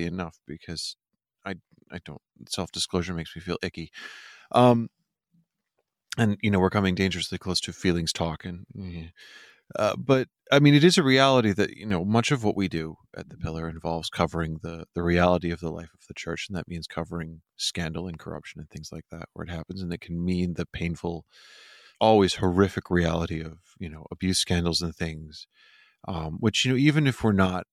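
From 11.73 to 11.90 s, right after "is a reality that" and before "much of what we", the speech suddenly dips by about 6 dB and then recovers. This is likely one channel dropping out, so the mono sum briefly carries only half its shared signal.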